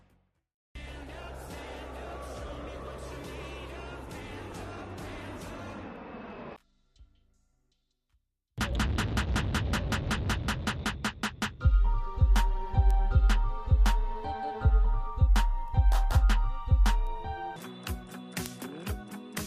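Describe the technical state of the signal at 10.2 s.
At 10.2 s the signal sits inside a run of word clock ticks lasting from 0.41 s to 18.46 s. The receiving device runs on its own clock, drifting roughly 15 ppm from the sender's. About every one and a half seconds a single sample slips, giving a sharp tick.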